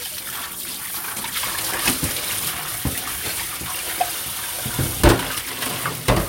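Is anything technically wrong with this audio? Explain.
No, no technical faults.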